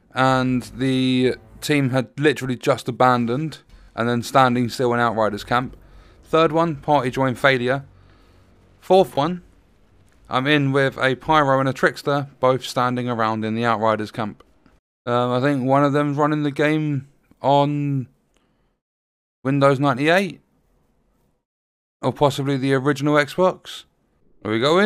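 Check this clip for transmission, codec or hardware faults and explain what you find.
There are two spots where the playback device ran dry and fell back on a repeated buffer. At 3.84–3.88 s one roughly 21 ms chunk plays two extra times, and at 9.15–9.17 s once more. Each repeat has a hard join, giving a brief stutter, which fits a 1024-sample buffer.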